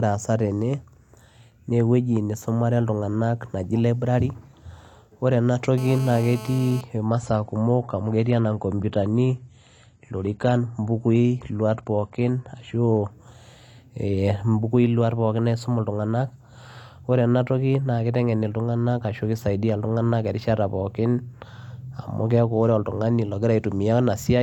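A hard, raspy buzz cuts into the speech from 5.78 to 6.81 s. It is steady, pitched at 217 Hz with a dense stack of harmonics, and sits about 16 dB below the signal. This is GSM phone buzz: a nearby 2G handset on a call pulses its transmitter 217 times a second, and the audio circuitry rectifies those radio bursts. From 7.11 to 13.11 s the treble suddenly thins, with nothing above 12 kHz and more codec artefacts, then returns without any gap. That points to an adaptive stream at a lower bitrate, which fits a switch from roughly 96 kbit/s AAC down to around 32 kbit/s while the connection slowed.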